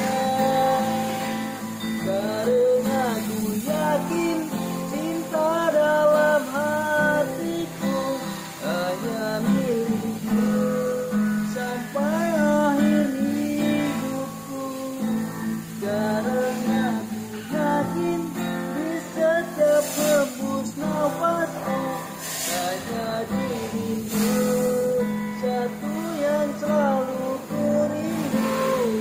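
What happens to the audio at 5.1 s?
Nothing goes wrong at 5.1 s; the audio is intact at that moment.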